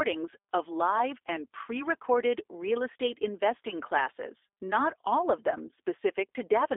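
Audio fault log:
throughout, G.729 codec: The speech has passed through a low-rate voice codec of the G.729A kind, which fits an 8 kbit/s VoIP link. Instead of storing the waveform, it resynthesises each short frame from a vocal tract filter, a pitch predictor and a few coded pulses, inside a telephone band of roughly 300 Hz to 3.6 kHz. Nothing above 3.8 kHz survives, so the speech sounds narrow and muffled, with plainly audible rough, synthetic coding damage.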